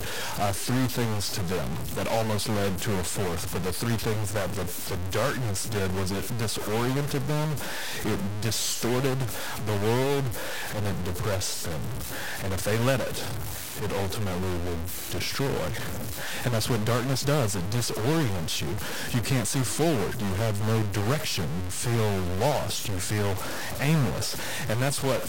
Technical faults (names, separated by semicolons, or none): stuck bit